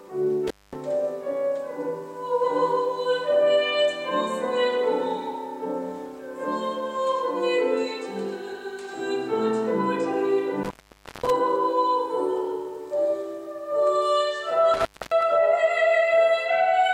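Intermittent contact breaks the sound three times. The first runs from 0.47 to 0.76 s, with the line open for about 0.22 s. The second runs from 10.63 to 11.30 s and is the longest, open for about 0.53 s. The third runs from 14.74 to 15.23 s, open for about 0.27 s. Each time, a loose plug or cable loses its connection. The audio drops out, and crackle marks the edges as the contact breaks and returns.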